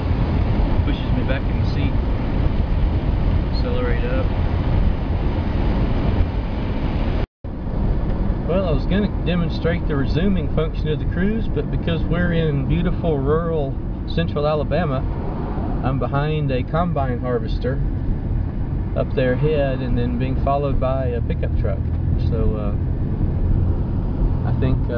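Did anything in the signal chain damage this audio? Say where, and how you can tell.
No, no signal-chain damage heard.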